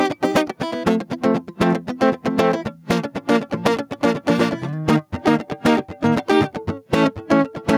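Gain pumping runs through the whole music clip: the level swells in the quieter gaps and ducks by around 5 dB under each loud passage, squashing the dynamics. The likely cause is input gain set far too high, with a fast limiter repeatedly clamping it.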